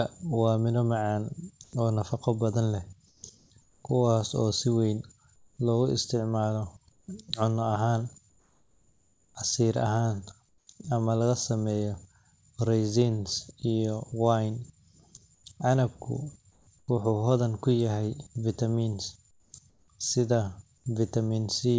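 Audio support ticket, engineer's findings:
Comfort noise in place of the background, six pauses: 1.64–1.73 s (after "miro macaan"), 3.08–3.83 s, 5.36–5.57 s (after "kuwaas oo si weyn", about 10 dB quieter), 6.92–10.67 s (between "loogu isticmaalo" and "ama laga sameeyo"), 15.35–16.88 s, 19.31–19.88 s. Likely sender-side discontinuous transmission, with the receiver synthesising steady, featureless noise. Unlike a noise gate, the pauses are filled with hiss rather than true silence. Band ends at 8 kHz, consistent with a G.722 path.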